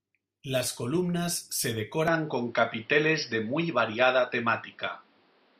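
At 2.08 s, right after "columnas se", the sound changes character abruptly and stays that way to the end. This is most likely an input switched to a poorer device. There is no gap at the change, but from that point nothing remains above 5.6 kHz, so the speech turns duller and boxier. The level steps by roughly 5 dB, and a new background noise floor appears, sitting roughly 35 dB below the speech.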